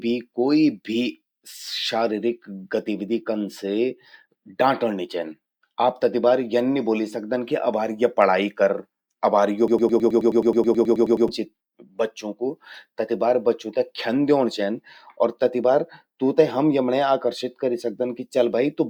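Speech recording with a broken-record loop from 9.68 to 11.29 s: a 107 ms fragment repeats 15 times back to back, likely a stalled player or stream, before "चि बच्चूं कु तति" resumes.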